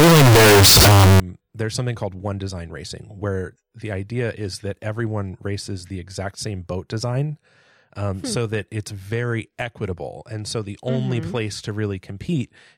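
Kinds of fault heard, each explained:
Float read as integer, 0.0 to 1.2 s: the opening speech turns into a harsh, near-square waveform at an almost fixed, high level, with background noise as loud as the voice, likely because 32-bit float samples were read as 32-bit integers.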